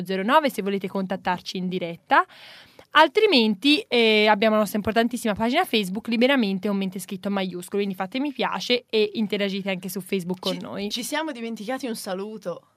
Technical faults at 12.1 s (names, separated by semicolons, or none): none